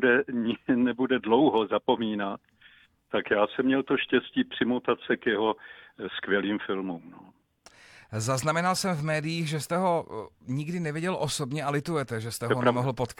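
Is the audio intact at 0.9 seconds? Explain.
Yes, the audio is intact at 0.9 seconds, with no dropout, click, distortion or other fault audible at that point.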